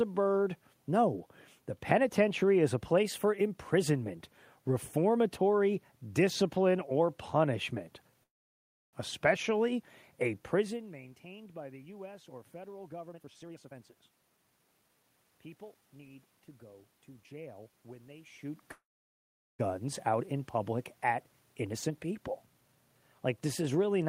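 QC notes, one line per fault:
8.23–8.95 s and 18.72–19.61 s, call audio freeze: after "reformatory discipline or punishment" the sound stalls for about 0.7 s, and later for about 0.87 s. Each stall opens with a brief fading continuation of the last sound, then goes silent for roughly 0.66 s and 0.77 s. The audio resumes exactly where it stopped, with nothing lost. Delayed packets likely drained the jitter buffer, adding 695 ms and 868 ms of delay.
13.09–15.82 s and 21.55–22.76 s, jitter buffer speed-up: between "or federal" and "need to go to" the audio runs at 125% speed, and after "out in public at" at 110%, with pitch unchanged, so both stretches sound hurried. After the pauses, the receiver's buffer held more than its target. It clipped out many short pitch-period pieces in succession, removing around 0.7 s in the first stretch and roughly 0.15 s in the second to pull the delay back down.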